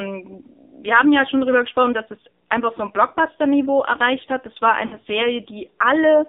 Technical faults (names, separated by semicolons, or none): AMR narrowband mobile codec; mains hum; lost AMR speech frames